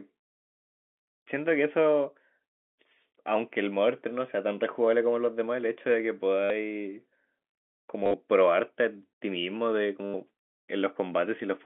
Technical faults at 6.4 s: packet loss with last packet repeated

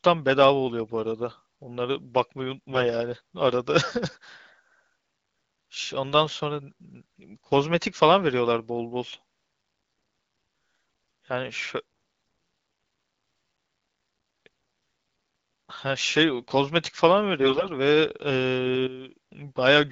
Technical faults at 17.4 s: AMR bit errors

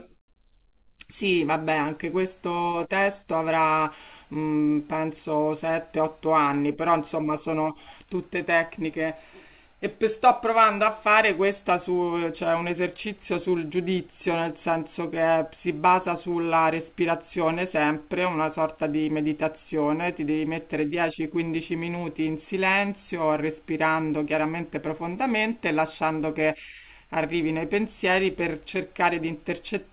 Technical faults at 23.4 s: none

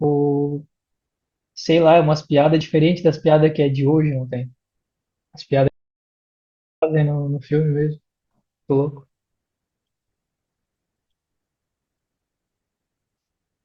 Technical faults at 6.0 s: audio dropout to silence

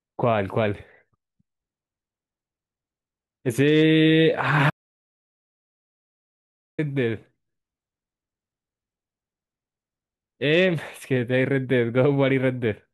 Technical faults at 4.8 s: audio dropout to silence

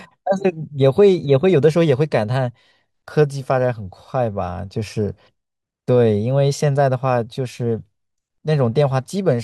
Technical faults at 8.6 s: none

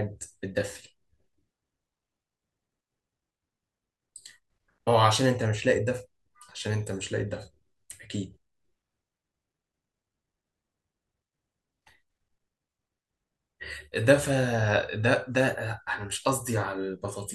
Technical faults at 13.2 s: none

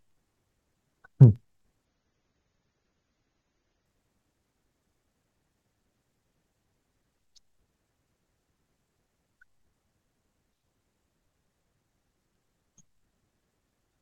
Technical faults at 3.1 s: adaptive stream at a lower bitrate

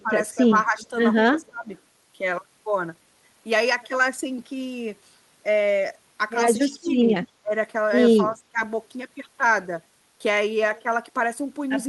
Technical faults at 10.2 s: none

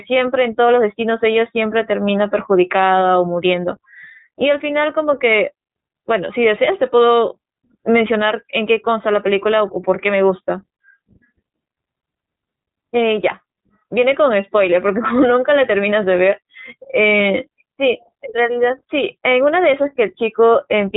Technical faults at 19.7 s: iLBC codec

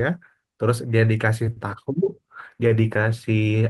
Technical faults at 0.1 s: none

